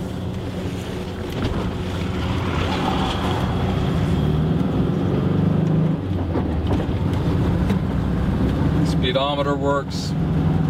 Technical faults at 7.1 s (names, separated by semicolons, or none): none